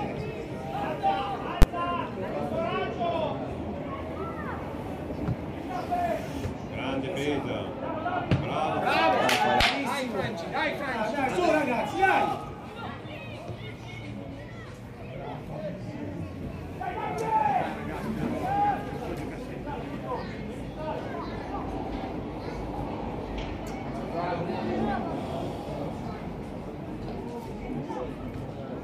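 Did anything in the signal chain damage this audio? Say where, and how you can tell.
Yes. A single sharp bang at 1.62 s, far louder than anything around it, marks invalid numbers at full scale. A calculation in the processing or sample-format conversion stage produced infinite or invalid values, which were clamped to the largest sample value for one block of about 12 ms. That fits a 512-sample buffer, and it is short enough to be heard as one bang.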